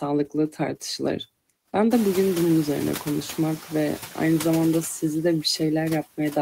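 Noise suppressor artifacts run through the whole speech clip: the suppressor pulls steady background noise down by about 15 dB frame by frame. Noise suppressor catching up appears from 1.9 to 3.39 s, just before "ve aynı zamanda sizi". Room noise jumps by about 23 dB around 2 s, and the suppressor's estimate lags, cutting only about 4 dB at first before taking about 1.5 s to settle.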